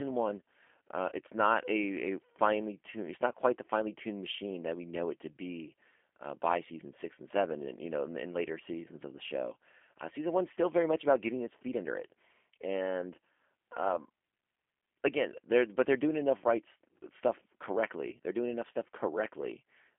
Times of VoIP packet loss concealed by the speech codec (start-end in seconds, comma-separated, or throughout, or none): 1.09-1.13, 10.54-10.58